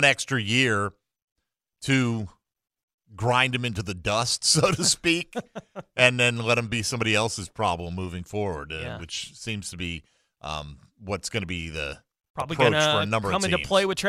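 A speech recording with nothing technically wrong to report. No faults can be heard at any point in it.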